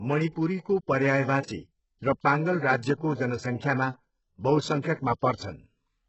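From start to finish the speech has a gritty, metallic treble, with s sounds turning lispy and nothing above 8 kHz. This is likely HE-AAC compression rebuilding the upper band from copied lower bands, and the heavy damage fits a bitrate around 8 kbps.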